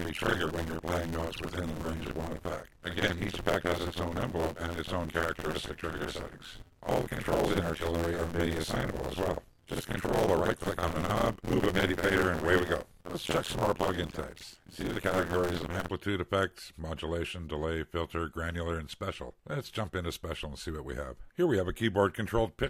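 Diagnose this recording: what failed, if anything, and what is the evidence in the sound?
Buffer tearing runs from 0.0 to 15.89 s, a driver or buffer stage fault. It sounds like a rough robotic buzz at 86.1 Hz laid over the audio, which fits a 512-sample buffer. The application writing the ring buffer and the hardware reading it have drifted out of step. Each period, about half the buffer still holds audio from the previous lap, some 50 ms old, and both splices are hard. That is the rattle heard at the buffer rate.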